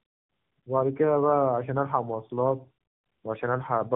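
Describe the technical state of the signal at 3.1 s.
At 3.1 s the speech carries tandem speech coding, present across the whole clip. The signal sounds like it was coded, decoded and recoded by narrowband AMR codecs in sequence, which fits an AMR-NB 7.95 kbit/s pass followed later by a 12.2 kbit/s pass, with nothing above 3.8 kHz. Unlike a single low-rate coder, the roughness and warble are compounded, so the speech sounds more muffled and gritty than either rate alone would make it.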